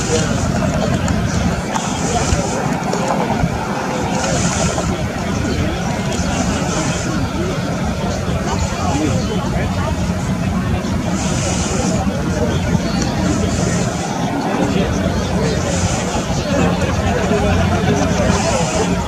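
Nothing in this audio stands out as a technical problem; it just runs along steadily with nothing going wrong that a listener would pick up on.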